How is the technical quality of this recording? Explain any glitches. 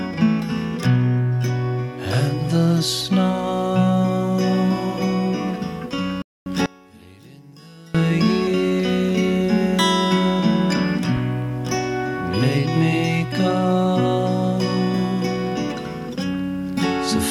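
The recording has two clear glitches, both close together near the middle.

Playback stall at 6.22 to 6.46 s. The sound cuts to silence for about 240 ms, then resumes. The player likely ran short of data or was blocked.

One channel inverted at 6.66 to 7.95 s. The level falls by about 26 dB. One channel's polarity was likely flipped, so the shared content cancels when the channels are combined.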